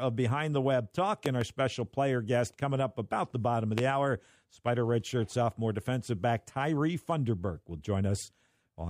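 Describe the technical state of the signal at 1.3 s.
At 1.3 s the signal carries a loud pop, spanning 1.26 to 1.45 s, just before "special player guest coming". Two sharp pops stand roughly 15 dB above the speech, which carries on underneath. The likely cause is a sudden electrical step or pulse, such as a plug, switch, static or driver glitch, entering the chain and being shaped by the circuits after it. Unlike a dropout, nothing of the speech is lost.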